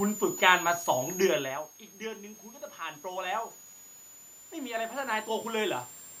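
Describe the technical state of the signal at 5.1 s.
At 5.1 s, automatic gain rising is under way (4.5 to 5.75 s). After the input dropped by about 16 dB, the gain control is lifting the level by about 5 dB, so the speech and the room noise swell together. That shared rise is what separates it from a talker moving closer.

A switching supply whistle also runs through this moment. It is a high tone around 7 kHz, about 15 dB below the signal, wandering between 6.48 and 7.36 kHz. The wandering pitch distinguishes it from a steady test tone or mains hum.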